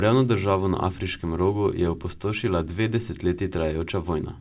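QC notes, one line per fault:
No faults turn up anywhere in the clip. The call path shows in the narrowband speech with nothing above 4 kHz, which fits G.711 mu-law at 64 kbps.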